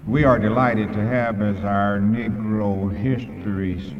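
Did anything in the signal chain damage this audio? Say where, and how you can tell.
Yes. From 1.0 s to the end, the sound suddenly runs at about 0.61 times its earlier pace. The damage likely comes from a software time-stretched section applied after capture, which lengthened the audio by repeating short fragments to hold the pitch steady. A tape or playback speed error would drop the pitch along with the pace. Here the pitch stays the same while the timing slows.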